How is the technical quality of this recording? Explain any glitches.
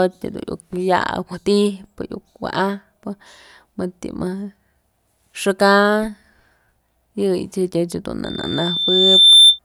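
The recording has one clear fault near the end. From 8.25 to 9.59 s, a loudspeaker feedback squeal occurs: the microphone re-amplifies its own loudspeaker at 3.6 kHz. The tone swells over about a second to roughly 10 dB above the speech, unlike a steady whistle that starts at full level.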